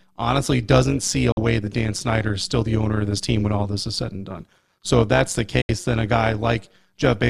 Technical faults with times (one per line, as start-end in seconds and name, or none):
0.00-7.29 overlap-add ripple
1.32-1.38 digital broadcast dropout
5.62-5.70 digital broadcast dropout